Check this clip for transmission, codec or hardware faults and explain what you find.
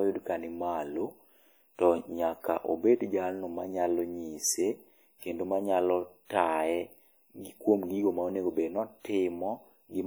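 One codec fault runs through the whole recording. The speech has plainly audible compression damage throughout, most likely from WMA compression. The damage level fits a bitrate near 48 kbps. The codec codes the signal in long transform blocks, so quantisation noise smears over tens of milliseconds. The result is a ringing, washy texture with a hiss that swells and fades with the speech. Content stops at about 20.1 kHz, with nothing above it.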